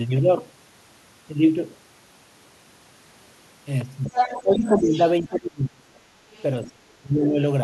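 From 4.04 to 5.1 s the other side's voice leaks through at nearly the speech level, likely loudspeaker echo the canceller failed to remove; a very faint trace returns at 6.32–6.42 s. Speech is suppressed in double talk at 4.11–4.18 s, 4.43–4.94 s, 5.21–6.08 s and 6.62–7.4 s, dipping by roughly 10 to 30 dB. The canceller likely could not separate the talker from the echo and turned both down.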